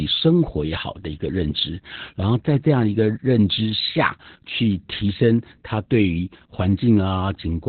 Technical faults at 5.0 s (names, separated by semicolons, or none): Opus voice compression